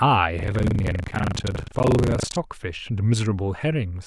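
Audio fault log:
0.36 to 2.38 s, buffer tearing: the speech takes on a rattling, robotic 25 Hz buzz, one tear every 40 ms, which fits writer and reader crossing inside each buffer period. In each period about a third of the audio is stale, from roughly 70 ms earlier, spliced in with hard joins at both ends. Unlike an underrun's silent dropouts, there is no silence: the buzz is built from repeated speech, and it lasts only while there is signal.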